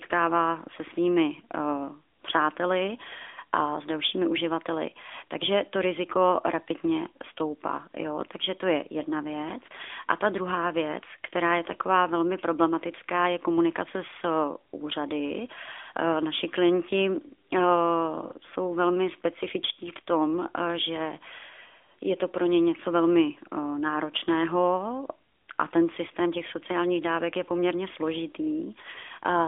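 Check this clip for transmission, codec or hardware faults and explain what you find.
One codec fault runs through the whole clip. The AMR narrowband mobile codec affects it from start to finish. The speech sits in a 300 Hz to 3.6 kHz telephone band, with nothing above 3.8 kHz. A vocal-tract model rebuilds each 5 ms from 2 to 10 pulses. The damage is plainly audible: thin, buzzy and synthetic, which fits AMR-NB at a mid bitrate of about 10.2 kbps.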